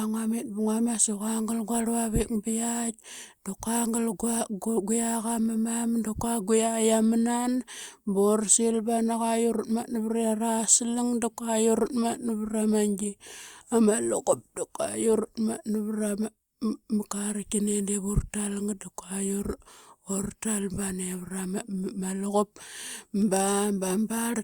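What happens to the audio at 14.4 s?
Nothing goes wrong at 14.4 s; the speech carries on intact there, with no dropout, click, distortion or other fault at that point.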